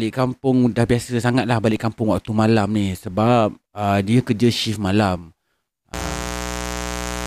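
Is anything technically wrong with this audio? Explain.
Yes. From 5.94 s to the end of the clip, a mains buzz sits under the speech, only about 10 dB below it. Sharp switching spikes, such as from a dimmer, a rectifier or an unshielded cable, enter twice in each 60 Hz cycle and build a dense stack of harmonics. It sounds like a steady, raspy buzz. On a spectrogram it shows as evenly spaced horizontal lines at multiples of 60 Hz reaching several kHz. The waveform shows spiky pulses repeating 120 times per second.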